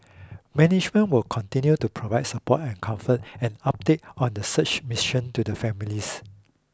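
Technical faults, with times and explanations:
Nothing technical stands out in this one, so there's no fault to point to anywhere in the recording.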